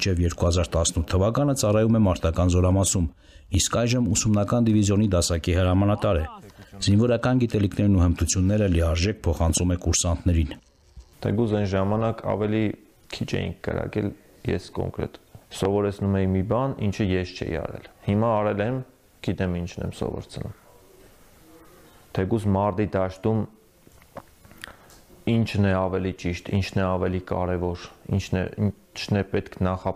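At 9.50 to 9.60 s a loud pop arrives as a quick pair, standing roughly 10 dB above the surrounding sound. At 15.65 to 15.68 s a single, stronger pop peaks roughly 15 dB over it. Each is a sharp thump from a sudden electrical pulse, likely a plug, switch or static discharge, added to the signal. Unlike a dropout click, nothing is missing: the audio carries on unbroken beneath both pops.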